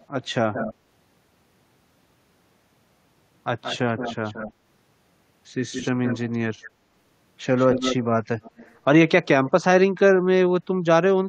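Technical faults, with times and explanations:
0.00–0.74, 3.62–4.53, 5.72–6.68, 7.57–8.04, 8.43–8.75 and 9.47–9.51 s: echo leak. A delayed copy of the speech returns 173 to 231 ms late, ranging from barely audible to nearly as loud as the speech, likely because a loudspeaker's sound at the far end got past an incomplete echo canceller.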